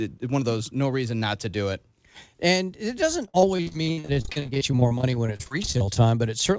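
From 3.26 s to 5.97 s, right after "it doesn't", the speech breaks up with repeated packet loss (robotic sound): dozens of short dropouts, the longest about 50 ms, each patched by stretching the preceding sound, so roughly a third of that stretch is filler. It sounds choppy, with pieces missing. A spectrogram shows smeared, repeated harmonic blocks and abrupt gaps, all capped at 8 kHz, consistent with a G.722 call path.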